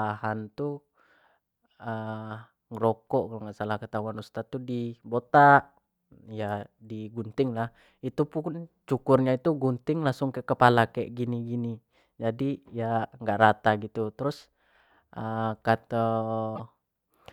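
A broken MP3 bit reservoir is the likely cause of the disruption at 16.55 to 16.60 s. For about 50 ms the speech skips ahead and comes out garbled. After a cut, the next frame reached back for borrowed data and decoded bytes from the wrong frame, consistent with 24 ms frames.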